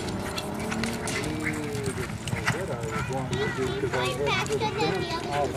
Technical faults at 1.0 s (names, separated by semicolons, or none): none